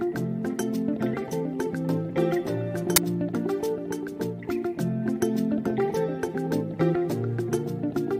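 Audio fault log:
2.96 s, file tags played as audio: an embedded cover picture's compressed bytes are decoded as samples, giving a brief very loud white-noise burst with hard edges. The waveform shows a dense block; the spectrogram shows a flat broadband vertical stripe.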